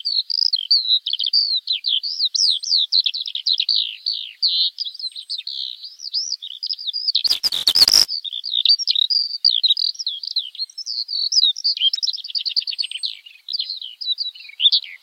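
A recording of everyday sounds with two faults. From 7.27 to 8.07 s there is buffer tearing: a steady robotic buzz at 345 Hz, which fits a 128-sample buffer. The writer and reader have slipped, so a small sliver of each buffer repeats audio from a lap earlier, with hard joins. Unlike a dropout, it only buzzes under signal and holds a fixed pitch. At 11.93 to 11.98 s a brief blip marks damaged data in a compressed stream. The decoder lost frame sync and jumped to the next header, giving a single glitch rather than a periodic rattle.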